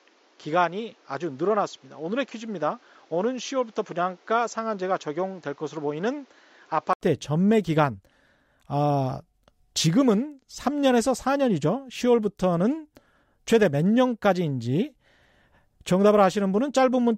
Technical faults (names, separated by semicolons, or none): input switched to a poorer device